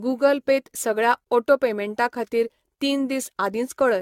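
Throughout the speech, generation loss is audible: the sound is swirly, smeared and hollow, with blurred consonant onsets and nothing above 17 kHz. It is likely from roughly ten rounds of lossy re-encoding, fitting AAC at around 96 kbit/s. Unlike a single coarse encode, the damage exceeds what that bitrate alone would cause.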